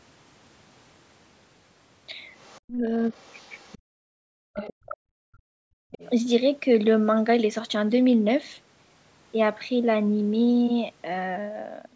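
Other side's voice leaking through appears in this speech recording at 2.38–2.6 s, 3.12–3.78 s, 4.56–4.97 s and 5.91–6.1 s. A second voice sits under the talker, faint in the first two stretches and much stronger around 4.6–5.0 s. The likely cause is a far-end loudspeaker whose sound reached the microphone and was only partly removed by the echo canceller, so its residue is audible.

Speech suppressed in double talk hits at 2.62–2.94 s and 4.15–5.4 s. The talker's level collapses very deeply, close to silence, for roughly a third of a second in the first case and about a second in the second, while the other side is also active. The likely cause is an echo canceller that could not separate near speech from loudspeaker echo and pulled both down together.

Background gated by the echo canceller occurs at 3.78–3.87 s and 5.68–5.91 s, each right beside a leak. The room tone drops by about 40 dB for a tenth and then a fifth of a second before returning. 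Here the canceller clamped the microphone hard while loudspeaker sound was present, then released it. Throughout, the call microphone chain passes nothing above 8 kHz.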